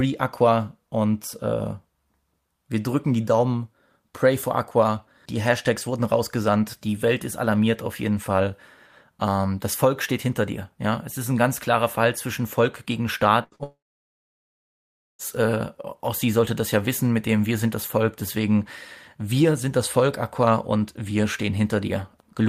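A burst of packet loss from 13.43 to 13.55 s interrupts this speech recording. About 80 ms of audio never arrived, and the receiver stretched the preceding sound over the hole, fading it as it went, so a decaying buzz or hiss replaces the missing stretch before playback jumps ahead. Short concealed packet loss follows immediately, from 13.56 to 13.62 s. Roughly 40 ms went missing and was patched by extending the last sound's pitch or noise and blending back into real audio, heard as a quick smear or flutter. A long network dropout then runs from 13.63 to 15.22 s. The last sound trails off into about 1.4 s of silence, and speech resumes at "äh auch sie sollte" with around 1.56 s absent, most likely because the connection stopped delivering audio entirely for that span.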